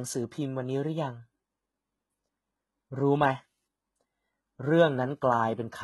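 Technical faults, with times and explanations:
Throughout, likely HE-AAC compression: heavy codec damage, nothing above 11.8 kHz, replicated treble gives gritty, lispy s sounds; spectrogram shows copied, smeared upper bands, suggesting about 16 kbps.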